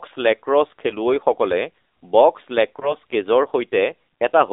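Throughout, an AMR narrowband mobile codec at a low bit rate, likely near 7.4 kbps, confines the speech to about 300 Hz to 3.7 kHz, giving plainly buzzy, synthetic damage. From 2.80 to 2.95 s, lost AMR speech frames, consistent with a single missing 20 ms frame, force the decoder to conceal. This causes a brief dip or warble before the voice recovers.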